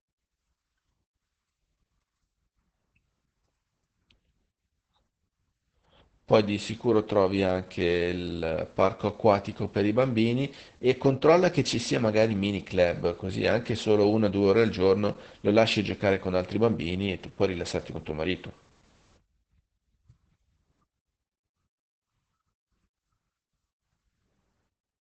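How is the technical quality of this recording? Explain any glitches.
Quality is limited by heavy low-rate coding. Opus voice compression runs throughout: SILK's coarse linear-prediction coding leaves the speech muffled above 8 kHz, hoarse and slightly robotic, consistent with about 10 kbps.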